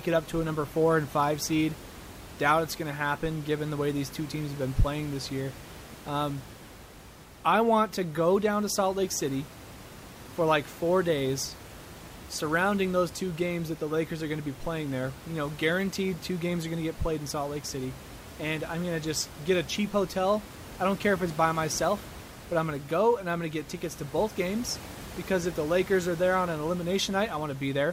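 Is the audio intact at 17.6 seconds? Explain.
Yes, the speech at 17.6 s is intact, with only the room's own background noise sitting about 17 dB beneath it.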